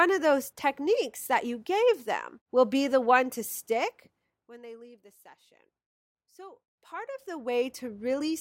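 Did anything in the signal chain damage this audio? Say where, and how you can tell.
Yes. From 6.47 to 7.82 s a fine ticking, zipping texture rides on the speech while the level changes by around 20 dB. This is zipper noise from a gain stage in the buffer processing: about a hundred unsmoothed steps per second, which fits block-by-block gain updates.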